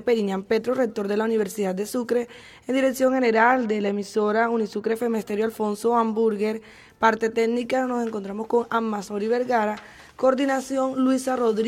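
From 3.09 to 4.96 s the audio turns dull, the sign of channel delay (comb filtering). One channel trails the other by a tiny amount, around a twentieth of a millisecond, which points to a delay of only a couple of samples. Summed to mono, the two cancel near 10 kHz. Unlike a plain low-pass roll-off, the top end recovers above that notch instead of falling away steadily.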